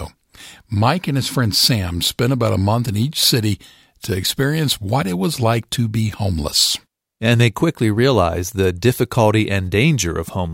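No technical faults can be heard anywhere in the recording; the signal stays steady and intact throughout.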